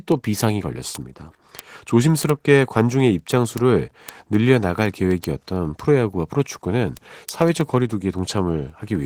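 Opus voice compression runs through the whole speech clip. The damage is plainly audible. The codec works in hybrid mode here. A linear-prediction SILK layer carries the lower band, and a CELT layer codes the range above 8 kHz. The band stays fullband, with nothing above about 20.2 kHz. The excitation is coded coarsely, and that coarseness can be heard. The sound fits a rate near 16 kbps with 20 ms frames.

Word clock ticks start at 0.12 s and run to 9.02 s. A receiving device is running on its own clock, not locked to the sender. The two clocks differ by roughly 300 parts per million. Each time they slip, one sample is dropped or repeated. The result is a tick of uneven strength about every 0.07 s, roughly 14 per second. That comes to around 150 ticks across the clip.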